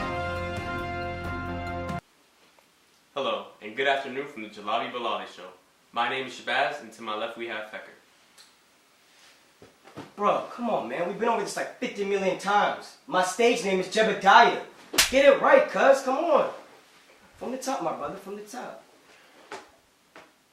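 No technical faults can be heard anywhere in the audio, so there is nothing to describe in time order.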